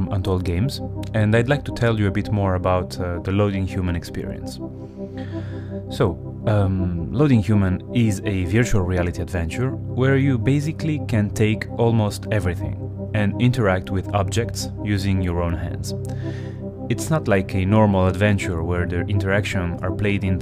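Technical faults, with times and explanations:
No technical faults can be heard in this clip.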